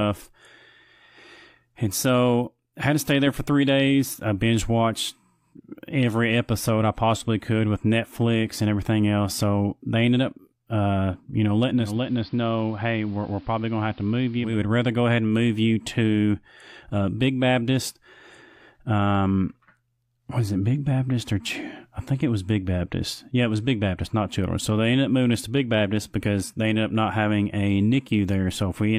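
Speech with digital radio blending to analogue from 11.76 to 14.61 s. A 237 ms cross-fade into the AM broadcast drops the level about 4 dB, narrows the treble and adds faint hiss. A spectrogram shows the upper band vanishing, and the waveform steps down.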